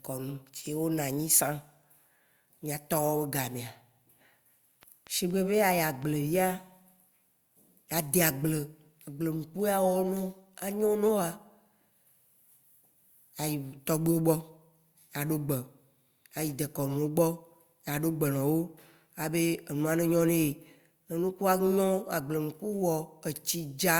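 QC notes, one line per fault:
4.83–6.04 s, train of clicks: about seven sharp, near-identical ticks arrive at a steady 4.2 per second, peaking roughly as loud as the speech itself, so they cut through both the talking and any gaps between phrases. The even spacing and matching shape likely point to electrical interference or a faulty connection or power supply injecting pulses. On a spectrogram they appear as evenly spaced thin vertical lines spanning the full frequency range; on the waveform, as narrow spikes standing out from the speech envelope.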